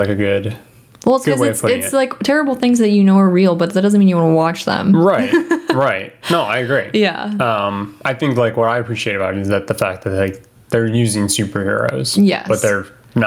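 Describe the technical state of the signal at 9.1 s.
Gain pumping is present at 9.1 s, as it is throughout the clip. The input gain is likely set far too high, with a fast limiter clamping each loud syllable, so the gain swings by around 20 dB, leaving the level squashed.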